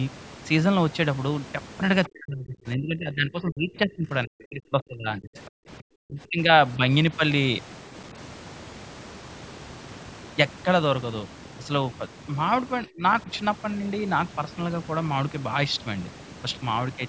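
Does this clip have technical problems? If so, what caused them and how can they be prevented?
Yes. Overdone noise removal runs through the whole clip. The noise reducer cuts individual frequency bands whenever they sit close to its noise estimate, so the background drops and breaks up into small twinkling specks. The quieter parts of the speech are cut along with the noise, in a band that already ends at 8 kHz from the call's normal microphone processing. To prevent this, set the noise reduction gentler or record in a quieter room so less reduction is needed.

Other side's voice leaking through, from 2.04 to 2.09 s, is a brief scrap of a second voice roughly 25 dB below the main speech. The likely cause is the far end's audio playing from the talker's loudspeaker and reaching the microphone, where the echo canceller left a short residue. It lasts about 50 ms just before the longer dropout begins. 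To prevent this, use a headset so no far-end sound reaches the microphone.

Speech suppressed in double talk occurs from 2.08 to 6.39 s and again from 12.87 to 13.03 s. In the first stretch the voice is turned down for around four seconds, falling by as much as about 35 dB. The second is a brief dip of about 25 dB. Likely both sides were talking at once, and the echo canceller could not tell the talker from the loudspeaker echo, so it turned everything down. Headsets, or better double-talk handling in the echo canceller, would prevent it.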